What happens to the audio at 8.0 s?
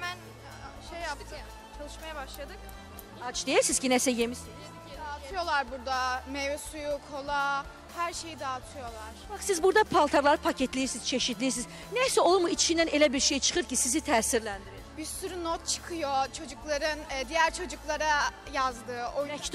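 Nothing goes wrong at 8.0 s; the audio plays through that moment intact, with no dropout, click or other fault.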